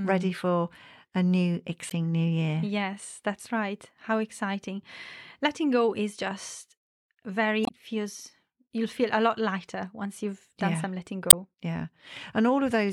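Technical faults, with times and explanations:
1.87–1.92 s, 7.63–7.69 s and 11.27–11.34 s: damaged data in a compressed stream. Corrupted bytes make the decoder misread frames and lose sync while it hunts for the next frame header. Each lasts 50–65 ms: after "ready for a new", before "it feels you'll feel", and after "done yeah some letting".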